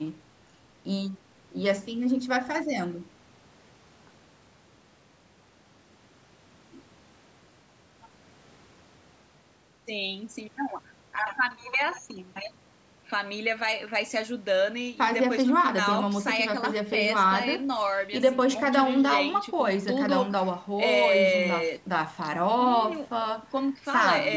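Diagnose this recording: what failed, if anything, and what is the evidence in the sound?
Nothing failed here; the recording shows no faults.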